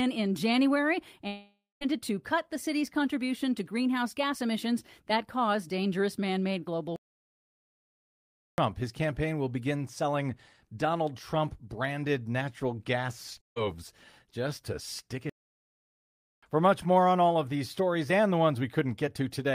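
At 1.27 s the speech breaks off for about 0.55 s in what is likely a long network dropout. The last sound is carried on as a buzz or hiss that fades away, and the line then goes quiet for about 180 ms before speech returns. About 540 ms of speech is simply missing. The repair fill and the stretch of silence mark this as lost data rather than a stalled player.

From 6.96 to 8.58 s, about 1.62 s, and again from 15.30 to 16.43 s, about 1.13 s, the output stops dead. These gaps are likely playback stalls, where the player ran short of data or was held up and could not produce sound until it recovered. Unlike the dropout, there is no buzz or fading hiss at the start of either gap. The sound cuts straight to silence mid-flow, which points to the player itself halting rather than to packets lost on the way.

At 13.41 s a burst of packet loss removes about 160 ms, ending at 13.58 s. The receiver stretches the last sound into a short fill that dies away, then silence, and speech resumes further on with that slice gone. 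It has the same fading fill as the dropout at 1.27 s but lasts far less time, which fits a few consecutive packets lost rather than a long outage.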